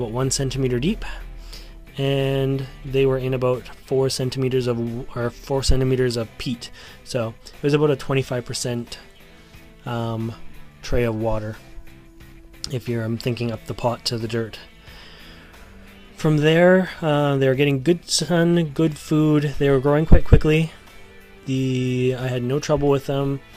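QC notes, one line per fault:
No faults found in this audio. Nothing here calls for a QC entry.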